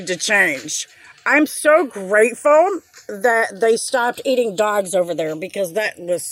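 A slow flanging sweep runs through the whole clip when the two channels are summed to mono. This is channels drifting apart: the left and right sides come from devices on separate clocks that disagree by something like 70 parts per million, so the inter-channel delay creeps to just under half a millisecond and the resulting comb notches glide steadily through the spectrum. From 4.22 s to 5.66 s the audio runs 5.75% fast and sits 96.9 cents sharp, roughly a semitone, before snapping back to its original speed and pitch. That pattern is likely a drift correction step, where clock-matching software abruptly changed the playback rate to rebalance its buffer, shifting speed and pitch together until it reverted.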